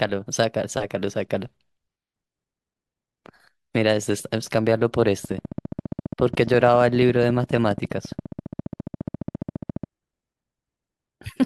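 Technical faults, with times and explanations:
5.25–9.85 s: train of clicks. A steady ticking runs over the speech for about 4.6 seconds, at roughly 14.6 clicks per second with even spacing, about seventy in all, and it carries on through the pauses. Each click peaks a few decibels above the speech. The cause is likely outside interference or a faulty connection or power supply injecting similar pulses. On a spectrogram this shows as evenly spaced thin vertical lines spanning the band. The waveform shows a comb of sharp spikes.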